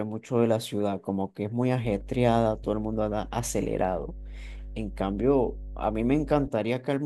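From 1.84 to 6.48 s, mains hum: 50 Hz power-line leakage adds a loud, steady low drone, visible as a flat horizontal line on the spectrogram.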